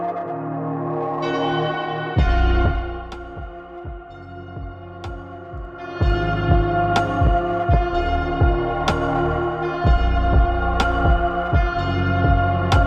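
A level change applied in unsmoothed 1 dB steps causes zipper noise from 2.61 to 3.10 s, as the level falls by roughly 15 dB, and from 5.56 to 6.13 s, as it climbs back. Each step clicks, producing a ticking about 30 times a second.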